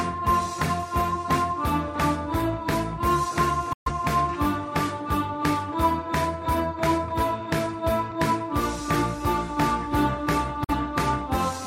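At 3.73 s the audio fades out over about 8 ms and stays silent until 3.92 s, then again from 10.64 to 10.74 s: a digital broadcast dropout. The receiver muted on failed frames, and the 128 ms and 43 ms gaps fit roughly three frames and one frame of lost programme.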